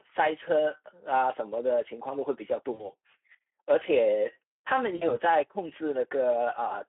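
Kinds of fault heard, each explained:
Speex codec: The speech sounds hoarse, grainy and somewhat buzzy throughout, confined to a narrow telephone band of about 250 Hz to 3.4 kHz. At this low rate, which fits roughly 11 kbps, the CELP coder has too few bits to model the excitation faithfully.
VoIP packet loss concealed by the speech codec: At 2.73 and 4.95 s the sound smears into a fading buzzy tone or coloured noise for about 60 ms each. Lost packets made the decoder extrapolate from its last pitch and filter while lowering the gain, and the speech stays weak for a few frames after packets return.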